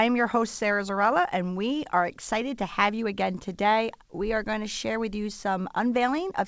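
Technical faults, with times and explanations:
Throughout, clock drift between sender and receiver: the sender's clock runs roughly 4 percent faster than the receiver's, so the jitter buffer keeps filling. The receiver sheds the excess by cutting short pieces, heard as small timing hiccups at uneven intervals across the speech.
0.02 to 6.45 s, repeated timing corrections: to keep pace, the receiver repeatedly trims short pieces, all in the same direction but unevenly spaced, so the audio plays at 105 percent speed. Each cut is small. Nothing above 8 kHz comes through the call path.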